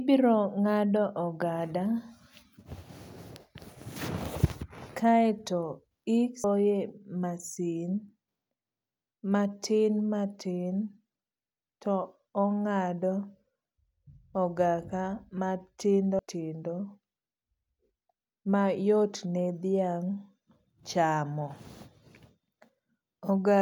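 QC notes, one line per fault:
6.44 s and 16.19 s: audio missing between chunks. About a third of a second of speech drops out at each point, and the two sides are butted together with no gap, so the sound jumps abruptly. The regular 10 s spacing makes a chunked recorder losing audio at each handover the likely cause.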